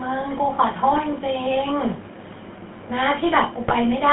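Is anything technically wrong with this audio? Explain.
Yes, there are two problems, both from a GSM phone path.

The whole clip has been through the GSM full-rate codec, and the damage is plainly audible. The codec rebuilds speech from a vocal-tract filter fed by sparse, regularly spaced pulses, and the band runs only from about 150 Hz to 3.5 kHz. That gives the voice a buzzy, gravelly roughness, which fits a 13 kbps GSM stream.

There are also GSM bit errors from 0.90 to 1.01 s and again from 3.64 to 3.77 s. Corrupted bits reached the decoder and scrambled the filter, pitch and gain values for a few frames, so the speech briefly breaks up into squawks, pops and gargling.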